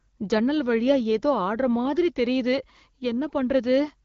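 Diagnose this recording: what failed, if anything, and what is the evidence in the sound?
Nothing in this speech recording points to a failure at any stage. The AMR wideband (HD Voice) codec path is working as designed at 12.65 kbit/s, with audio band-limited to about 7 kHz and only light coding damage audible.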